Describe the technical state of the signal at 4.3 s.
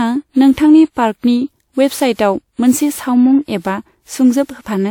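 At 4.3 s the speech sounds swirly, smeared and hollow, with blurred attacks and nothing above 18.6 kHz, as it does throughout the clip. This is likely generation loss: around four lossy encodes, consistent with a WMA-type codec near 96 kbit/s, each requantising on a shifted frame grid so noise and spectral holes accumulate.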